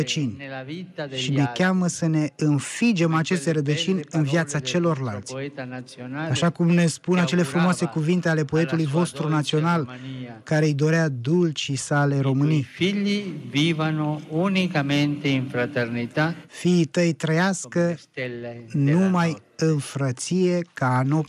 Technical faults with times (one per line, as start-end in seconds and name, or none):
none